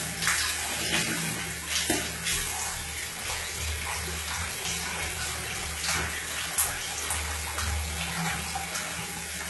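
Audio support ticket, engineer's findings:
Throughout: treble gritty and metallic, nothing above 11.8 kHz, heavy coding damage. Likely HE-AAC compression at a very low rate, consistent with about 16 kbps. Upper band rebuilt by spectral band replication from copied lower bands, so harmonics misalign above the crossover.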